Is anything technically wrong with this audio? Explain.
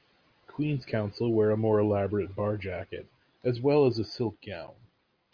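No, nothing technically wrong can be heard in this speech recording. No faults turn up at any point in the clip.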